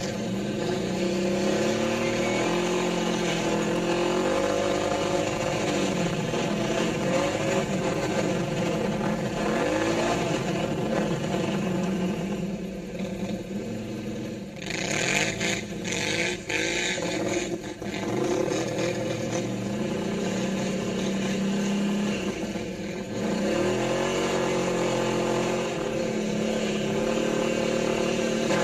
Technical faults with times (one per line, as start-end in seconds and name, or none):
0.00-28.63 channel delay (comb filtering)